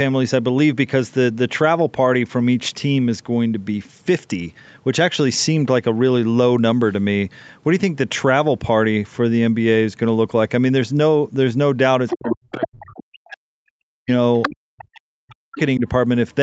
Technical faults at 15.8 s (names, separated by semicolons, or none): speech suppressed in double talk